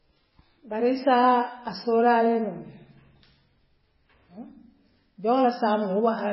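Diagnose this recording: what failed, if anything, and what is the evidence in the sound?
The failure sits at the codec stage, likely MP3 compression at a very low rate, around 16 kbps. Throughout the speech, nothing is present above 5.6 kHz and the damage is heavy: a watery, swirling texture with smeared attacks. A spectrogram shows a hard ceiling and flickering, patchy high bands.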